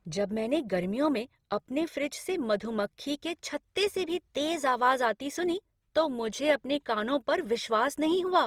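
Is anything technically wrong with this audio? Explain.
Yes. Throughout the speech there is Opus compression damage, likely at around 24 kbps: band energies are kept but starved bands get filled with folded or noise content, so the sound turns grainy and rough.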